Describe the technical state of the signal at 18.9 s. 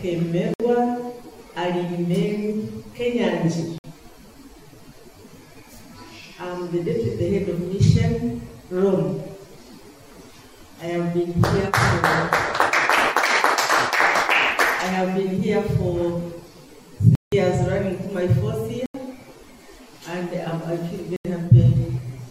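A short hole, 18.86 to 18.94 s: a block of digital silence, 85 ms of zeros, likely from an output buffer filled too late.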